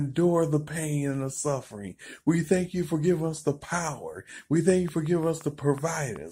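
From 4.70 s to 6.17 s a train of clicks sits on top of the sound: around ten similar pulses at a regular 5.5 per second, peaking a few dB above the programme level. Likely interference from nearby equipment or a faulty connection or power supply injecting repeated spikes, heard as steady ticking.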